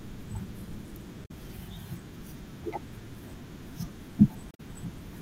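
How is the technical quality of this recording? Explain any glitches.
The speech recording has two brief glitches. Damaged data in a compressed stream occurs at 1.24 to 1.31 s and 4.51 to 4.60 s. Corrupted bytes make the decoder misread frames and lose sync while it hunts for the next header, giving short chirps or blips of about 70 and 95 ms.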